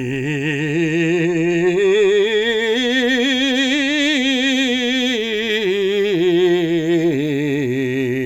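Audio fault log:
No audible faults detected.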